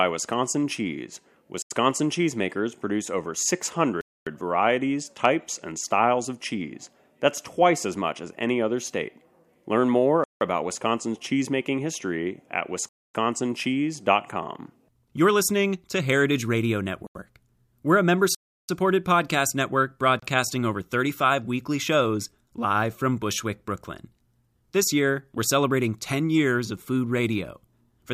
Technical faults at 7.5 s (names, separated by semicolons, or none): none